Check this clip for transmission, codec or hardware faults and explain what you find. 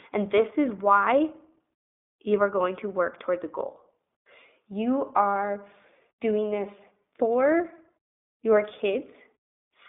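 The clip has one codec fault, present throughout: iLBC codec coding. The speech is confined to a line band of 250 Hz to 3.6 kHz, with nothing above 3.8 kHz. iLBC codes each 20 ms frame's excitation independently, at a rate that fits its 15.2 kbps mode. The damage is plainly audible. Speech sounds muffled, slightly rough and synthetic.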